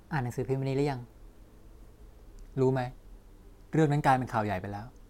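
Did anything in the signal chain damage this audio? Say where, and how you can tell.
Yes. Wrong sample rate at playback from 0 to 2.32 s: speech runs 1.09 times fast and about 1.5 semitones sharp, which fits 44.1 kHz audio played at 48 kHz. On a spectrogram, harmonics sit higher and compressed in time, then step down at 2.32 s.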